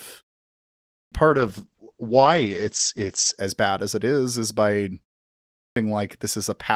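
At 0.90 s, after a 0.75 s pause, the speech starts abruptly. This is a clipped start after a pause. The output device idled in the silence and was slow to wake. About 0.22 s of the onset is lost.

From 1.28 s to 3.45 s comes a call bitrate drop. The speech turns rough and muffled, with the top end cut from 20 kHz to 8 kHz. The sound points to a fall from about 32 to 10 kbps, held lowest for 2.11 s.

At 5.55 s, after a 0.58 s pause, a second clipped start swallows about 0.21 s of the onset.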